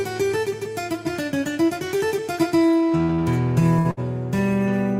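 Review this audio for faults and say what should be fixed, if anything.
A burst of packet loss hits at 3.03–3.12 s and again at 3.91–4.00 s. In each, the receiver filled about 60 ms by continuing the last sound and fading it, then jumped ahead past about 60 ms of missing audio. A spectrogram shows a smeared, decaying band followed by an abrupt change. On the waveform, the concealed stretch looks like repeated, shrinking cycles. Forward error correction or redundant packets would let the receiver rebuild these gaps.

A short stall from a late packet occurs at 3.15–3.21 s, lasting 36 ms, and at 3.79–3.88 s, lasting 61 ms. The jitter buffer ran dry, so the last sound was stretched until the packet arrived, and playback resumed where it left off with nothing lost. Each stall appears as a horizontally held spectral slice that pushes later events back. A deeper or adaptive jitter buffer would absorb this delay variation.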